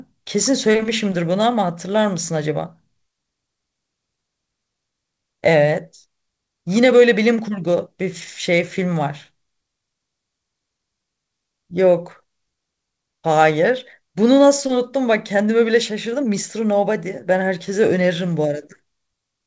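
No technical faults are audible in the speech, which has come through a WebRTC call path whose wideband coding leaves nothing above 8 kHz, consistent with a G.722-type call codec.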